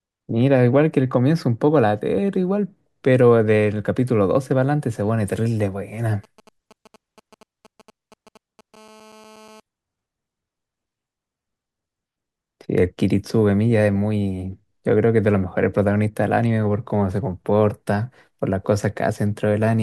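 From 6.24 to 8.76 s, GSM signalling bursts break into the speech: a galloping dit-dit-dit of ticks and brief buzzes at a 217 Hz burst rate, roughly 25 dB below the speech. A nearby 2G phone's radio pulses are being rectified by the audio circuitry.

From 8.77 to 9.60 s, this becomes a continuous GSM phone buzz as the handset moves into a call and transmits steadily. The result is a hard, raspy 217 Hz tone rich in harmonics, about 26 dB below the speech and unrelated to it.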